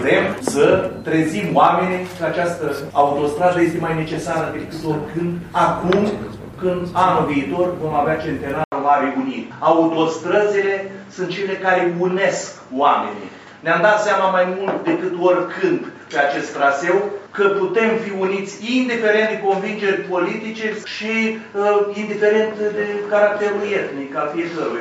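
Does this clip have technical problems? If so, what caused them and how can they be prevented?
Yes. At 8.64 s the sound goes silent for about 80 ms, then returns duller and boxier until the end, with nothing above 7.6 kHz and a faint new noise floor well beneath the signal, at much the same loudness. The likely cause is the input switched to a poorer device mid-recording. On a spectrogram the upper band is cut off sharply after the gap; the waveform shows a brief flat line there. Locking the input device in the system settings and disabling automatic switching to headsets prevents it.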